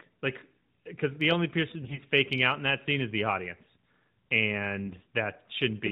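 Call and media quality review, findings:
AMR bit errors, 1.82–2.00 s, after "because the only person", before "faking out in that": speech turns hoarse and gargly while pitch and level hold. Flipped low-priority bits misplace excitation pulses and skew fine gain and spectral values. The span fits about eight damaged 20 ms frames.

AMR bit errors, 4.85–5.06 s: same scratchy, gargled texture at steady loudness, likely a weak radio link at a bit error rate of about 7 percent. Narrowband 12.2 kbps AMR-NB carrier, light codec colouring.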